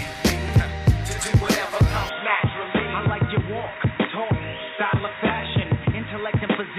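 At 0.49 to 0.53 s, a single loud pop appears, most likely a brief voltage pulse from a plug, switch, static discharge or driver glitch entering the signal chain. It lands as one sharp click-thump, peaking a few dB above the surrounding sound, which continues unbroken beneath it.

From 2.09 s to the end, the system's input was likely switched to a poorer device, such as another microphone or a headset call profile. With no gap at the changeover, the audio abruptly turns dull and boxy, with nothing above 3.8 kHz. It also drops a few dB in level and gains a new noise floor roughly 40 dB down.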